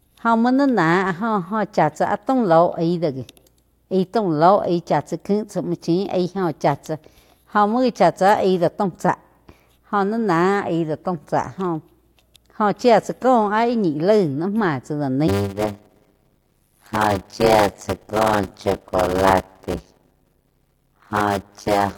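Speech that, from 15.27 s to the end, takes on a steady 100 Hz buzz and slows to about 0.53 times its normal speed while keeping roughly its normal pitch. This is a block size mismatch (padded): shorter blocks are zero-filled to a longer read size, which fits 256-sample blocks read as 480-sample blocks, inserting a gap every block.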